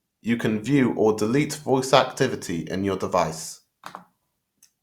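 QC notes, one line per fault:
No faults heard.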